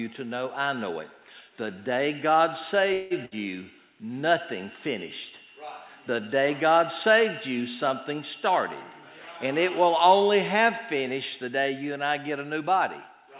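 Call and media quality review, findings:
Call audio freeze, 2.93 to 3.13 s. Likely cause: packets delayed in transit, jitter buffer underrun. Receiver extends the last sound as a fading buzz or hiss for about 174 ms, then playback resumes where it stopped. Nothing lost; the stall inserts a gap and adds about 174 ms of latency.

Burst of packet loss, 3.25 to 3.37 s. Consecutive packets lost or arriving too late to play. Concealment holds and attenuates the last sound for about 60 ms, then audio jumps ahead, with 60 ms of content gone. Sits just after the freeze, over the G.711 mu-law path's 4 kHz band limit.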